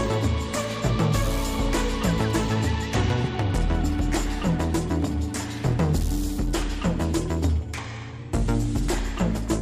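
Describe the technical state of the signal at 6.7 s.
At 6.7 s the signal is intact, with no audible fault at that moment.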